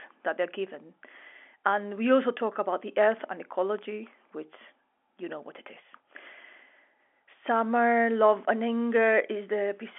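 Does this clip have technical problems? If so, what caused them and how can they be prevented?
No, nothing in this speech clip stood out as a technical problem on listening, so there is nothing here that needs preventing.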